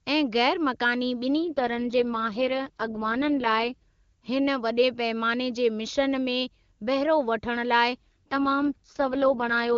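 An AMR rate drop from 1.51 to 3.74 s, and again from 7.96 s after "वठण लाइ" to the end, leaves the AMR-WB wideband band intact but turns the sound rough and raspy, consistent with falling from 23.85 to 6.6 kbit/s.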